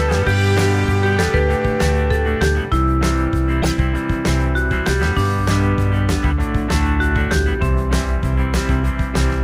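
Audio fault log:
3.62–3.72 s corrupt frame decoded: a few damaged compressed frames played anyway, misplacing energy into a loud burst near full scale, shown as a bright, blocky spectrogram smear.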